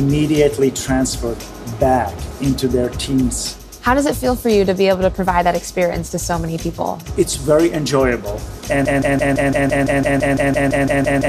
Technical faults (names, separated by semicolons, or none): broken-record loop